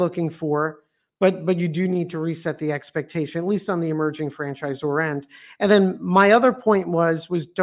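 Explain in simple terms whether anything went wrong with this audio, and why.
Nothing went wrong with this speech recording that a listener can pick out. At no point does anything stand out as a technical problem, so there is nothing to explain.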